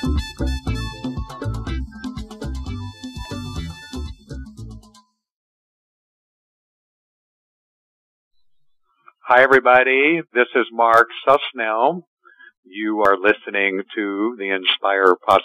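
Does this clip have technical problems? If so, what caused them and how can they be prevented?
Yes. Audio missing between chunks: the sound skips abruptly at 3.25 s and 13.05 s. About a tenth of a second vanishes each time, with no silence. This is likely a recorder writing 5 s chunks and dropping audio at each handover. Buffering continuously across chunk boundaries prevents it.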